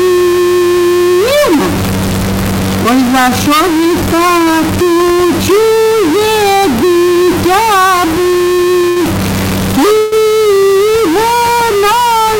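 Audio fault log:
throughout: stuck bit. A distortion rides on the whole clip, and the quieter passages and pauses carry a gritty noise floor instead of falling silent. The likely cause is a single data bit held at a fixed value, throwing roughly half the samples off by that bit's weight.
8.89–8.99 s: short stall from a late packet. The sound is held for about 68 ms before resuming from the same point. The jitter buffer ran dry, so the receiver stretched the last audio until the packet arrived. No audio is lost, but later audio runs 68 ms late.
9.98–10.15 s: call audio freeze. For about 139 ms the audio turns into a fading continuation of the last sound, without dropping to silence. It then picks up where it stopped, adding another 139 ms of delay with nothing missing. This is likely network hold-up that emptied the jitter buffer.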